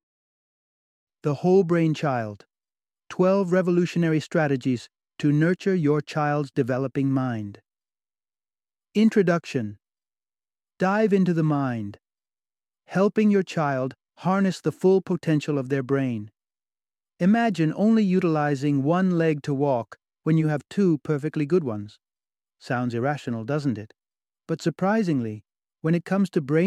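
No technical faults can be heard anywhere in the recording; the signal stays steady and intact throughout.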